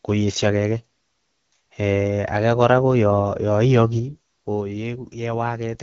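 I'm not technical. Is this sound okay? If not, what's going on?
No. Throughout, the speech was squeezed through the AMR wideband (HD Voice) codec, the system behind HD phone calls, at one of its lowest quality settings. That makes the speech sound plainly rough and raspy, and everything above 7 kHz is cut away, so it lacks crispness.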